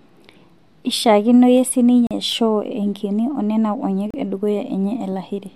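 At 2.07 s the speech drops out into a hard-edged hole of about 39 ms, and at 4.10 s it happens again for about 33 ms. These are gaps between stream segments: the spacing matches 2-second segments whose time stamps don't quite meet, so the player inserts silence in the space between them. Nothing is missing from the speech itself. The surrounding audio is simply pushed later by each gap.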